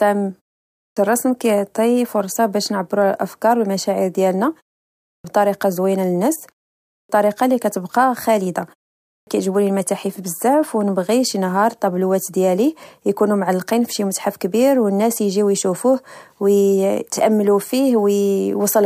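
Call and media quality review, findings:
Clipped start after a pause, speech onsets cut at 0.72, 5.01, 6.83 and 9.04 s. About 0.23 to 0.26 s of each onset lost after pauses of only 0.38 to 0.48 s; words begin abruptly without initial sounds. Probable component: output device power-saving. Mechanism: device sleeps in brief silence, needs roughly a quarter second to wake and relock, swallowing the first audio.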